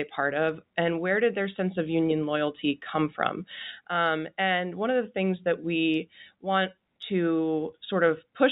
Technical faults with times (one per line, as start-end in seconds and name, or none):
none